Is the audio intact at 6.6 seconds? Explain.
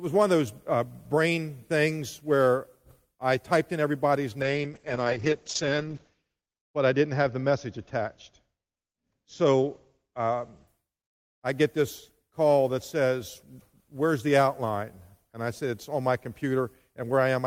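No. At 6.6 s the audio is inside a call bitrate drop (4.42 to 10.73 s): the encoder fell from 32 to 8 kbps, coding more coarsely and narrowing the band from 20 kHz to 8 kHz. Unlike a plain low-pass filter, it sounds both muffled and roughened.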